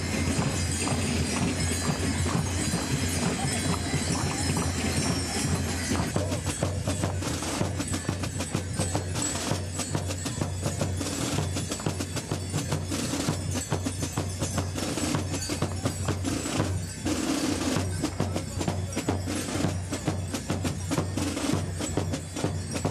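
Nothing stood out as a fault on listening.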